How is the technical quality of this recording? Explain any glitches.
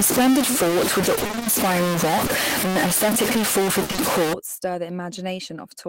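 The recording is poor, with a long-running distortion and several packet-loss glitches.

From 0.0 to 4.33 s, ending just before "stir the", a distortion fills even the pauses. A stuck bit is the likely cause. On a waveform, about half the samples are offset by a fixed step, and the quiet gaps show as raised noise.

From 1.15 to 1.47 s, repeated packet loss (robotic sound) appears as eight gaps of up to 20 ms each. They are patched by extending the previous audio, so half of the stretch is concealed. It sounds choppy. A spectrogram shows repeated smeared patches.

Around 2.25 to 2.29 s, a short concealed packet loss shows up as a brief smear where 20 ms was filled in from the preceding sound. A spectrogram shows a short blurred strip.

From 3.83 to 3.91 s, a burst of packet loss replaced 60 ms with continued, fading sound. The buzz or hiss dies away and the audio jumps ahead. On the waveform, this shows as a decaying stretch.

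Immediately after, at 3.91 to 3.95 s and 3.95 to 3.99 s, two more short concealed packet losses each patch 20 ms. Together they extend the wobble, and the spectrogram shows a blurred region.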